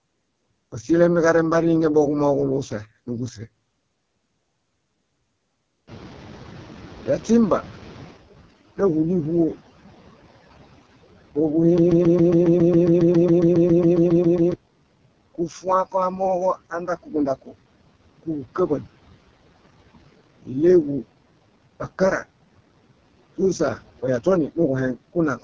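From start to finish the background sinks away between phrases and swells back under the talker. These are noise suppressor artifacts: the suppressor cuts whatever bands it judges to be steady noise, frame by frame, here by about 17 dB, so the amount of noise left behind keeps shifting with the speech.

Throughout, the speech also sounds rough, raspy and buzzy, with the top end replaced by a hissy, synthetic sheen. That is heavy damage from the AMR wideband (HD Voice) codec, which models the voice with pulses through a vocal tract filter up to 6.4 kHz and fakes the band above with shaped noise. The coarseness fits its lowest 6.6 kbit/s mode, where the model has too few bits to track the voice.

At about 6.0 s the room noise jumps by about 19 dB. From 5.87 to 8.25 s it comes through only lightly reduced, then gradually sinks. This is the noise suppressor catching up. Its estimate of the background was still tuned to the quieter room, so it needed about 2.4 s to adapt before pushing the new level down by about 13 dB.

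From 11.78 to 14.54 s a single 137 ms fragment repeats exactly, back to back, 20 times, producing a stuttering, mechanical chatter, and the audio that belonged in those nearly three seconds never arrives. This is a broken-record loop. The likely cause is a stall in the player, encoder or stream, which kept resending the last fragment it held until fresh audio came through.

Between 15.35 and 17.55 s parts of the speech, well under a second in all, go faint and swallowed, dipping by as much as about 17 dB. Again at 18.23 to 18.85 s a brief moment of about a tenth of a second drops by about 15 dB. Both are speech cut by the noise suppressor: it mistook soft, noise-like stretches of the voice for background and turned them down along with it.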